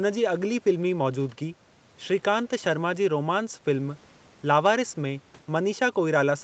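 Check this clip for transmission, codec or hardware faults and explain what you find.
Nothing stood out on listening to this speech clip; its top end stops at about 8 kHz, as expected from a call path at that bandwidth.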